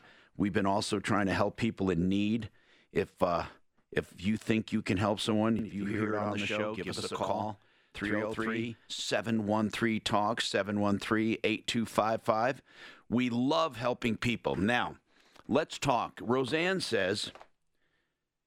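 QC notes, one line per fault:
5.59–9.08 s, channel delay (doubling): just after "you can help someone" the speech is doubled by a distinct slap echo at equal level, trailing by 85 ms. One channel runs late, which fits a 4096-sample buffer, and both channels are summed to mono.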